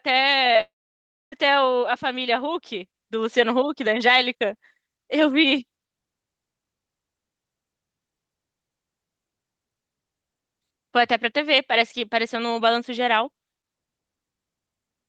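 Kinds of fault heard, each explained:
Short concealed packet loss: Two bursts of about 20 ms of the speech stream reached the decoder too late, at 0.53 s and 0.57 s. The receiver patched each gap by extending the preceding sound and then blending back, which leaves a brief smear near the start.
Long network dropout: A likely loss of incoming audio from 0.61 s to 1.34 s left the receiver with nothing to decode. It stretched the last sound into a buzz or hiss that fades, followed by roughly 0.6 s of silence, before speech resumed with that stretch gone.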